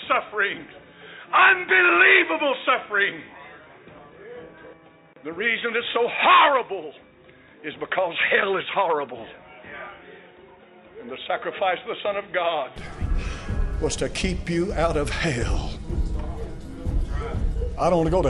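From the start to 12.76 s the audio sounds dull and boxy, with nothing above 3.8 kHz, about 5 dB lower in level, and with its own background noise around 55 dB below the signal. At 12.76 s it clears up with no gap. The likely cause is the input switching to a poorer device.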